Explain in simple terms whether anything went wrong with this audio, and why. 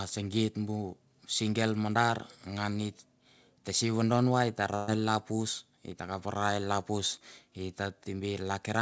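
A burst of packet loss hits from about 4.76 to 4.89 s. A short run of the call's audio data never arrived. The receiver stretched and faded the last sound for about 115 ms, then jumped ahead, skipping roughly 120 ms of speech.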